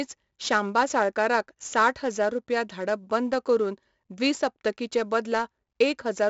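From start to finish the speech carries 4-bit ADPCM compression. Each sample is coded as a coarse step from a predicted value, so a gritty hiss rides on every loud syllable and sharp onsets smear where the step size lags behind. The band stops near 7.7 kHz, which fits 64 kbps at a 16 kHz rate. On a spectrogram, broadband noise rises and falls with the speech energy beneath a hard ceiling. The waveform shows roughened, stair-stepped attacks.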